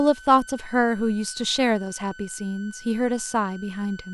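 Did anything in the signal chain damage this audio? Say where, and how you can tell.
Yes. A switching supply whistle, entering in the analogue stage through the power feed, sits under the speech for the whole clip. It is a thin high tone near 1.5 kHz, drifting slightly between 1.5 and 1.52 kHz, roughly 20 dB below the speech. A converter running in audible burst mode radiates or conducts its switching ripple into the wiring. Mains hum differs, sitting low as a steady series of 50 or 60 Hz harmonics that never wander.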